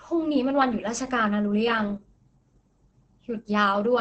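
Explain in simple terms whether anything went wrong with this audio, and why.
Throughout, the speech sounds muffled and hoarse and stops near 8.9 kHz, likely heavy Opus compression in speech mode. Unlike MP3 damage, it swirls less.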